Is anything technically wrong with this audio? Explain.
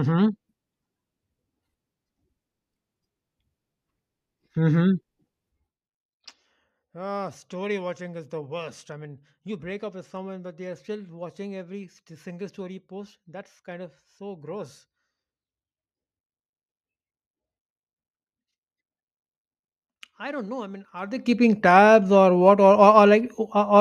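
Yes. From 20.97 to 21.36 s the speech carries zipper noise. A level change of roughly 20 dB is applied in 1 dB steps, around forty a second, with no smoothing. Each step clicks. The result is a brief ticking, zipping texture over the sound.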